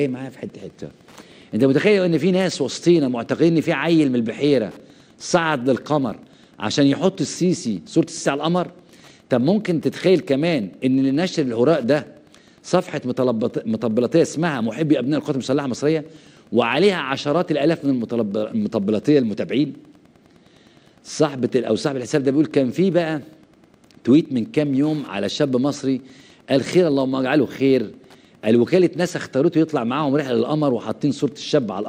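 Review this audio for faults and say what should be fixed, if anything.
Wi-Fi interference runs throughout: steady ticks every 102.4 ms from a rectified beacon, roughly 40 dB below the signal, appearing as evenly spaced vertical lines on a spectrogram. Moving the Wi-Fi radio away from the audio circuit and using shielded cabling would prevent it.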